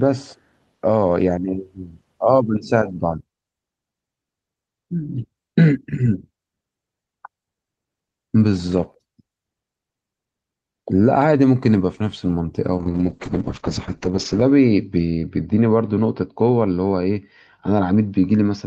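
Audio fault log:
12.78–18.67 s, call bitrate drop: the Opus encoder is starved of bits, consistent with a fall from about 32 kbps to about 7 kbps. Coarser coding turns the speech rough and watery, and the bandwidth narrows from 12 kHz to 8 kHz, muffling it, worst for 1.65 s.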